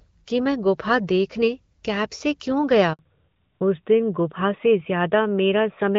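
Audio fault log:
2.93 to 2.99 s, handover gap: the sound cuts out for 60 ms as the call is passed from one network to another. No speech frames reach the receiver while the link is being switched, so the audio decays within a few tens of milliseconds and stays silent until the new connection begins delivering frames. Whatever was said inside that window is simply gone rather than smeared or repeated.
2.99 to 5.98 s, fallback to narrowband: right after the gap the call drops from HD Voice, which sounds like AMR-WB at about 12.65 kbit/s, to an older narrowband codec, consistent with AMR-NB at 12.2 kbit/s. Nothing above 4 kHz survives from this point to the end, so sibilants and the airy top of the voice disappear and the speech turns duller and rougher, with a clearly telephone-like bandwidth in contrast to the wider, lightly coded first half.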